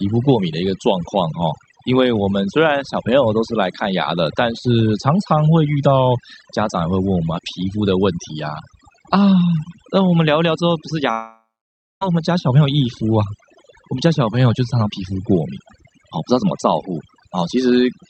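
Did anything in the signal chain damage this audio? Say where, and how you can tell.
Yes. Overdone noise removal in call processing runs throughout. The background drops and breaks into twinkling specks. Quiet speech bands get cut.

From 11.11 to 12.03 s, the speech breaks into a fading buzz or hiss, then silence. It resumes with that stretch missing. A long network dropout is the likely cause.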